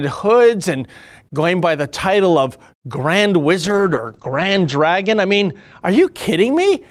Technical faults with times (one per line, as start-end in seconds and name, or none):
3.64-5.87 call bitrate drop